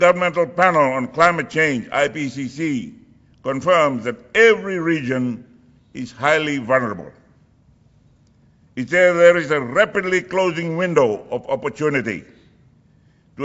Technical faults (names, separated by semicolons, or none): none